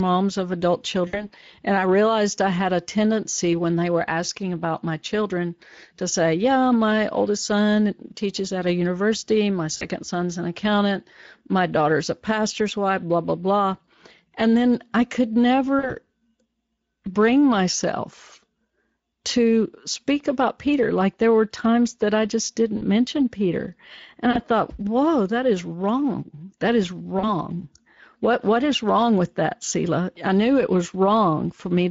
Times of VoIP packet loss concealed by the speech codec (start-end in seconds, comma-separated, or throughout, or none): 1.07-1.31, 9.77-9.85, 15.79-15.95, 22.77-22.83, 24.31-24.39, 27.19-27.25